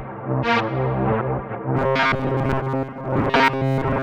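From 1.77 s to 4.03 s, robotic sound from repeated short buffers: a rigid 134 Hz buzz, likely from looping 7.5 ms chunks, with a fixed pitch rather than gaps or stutters.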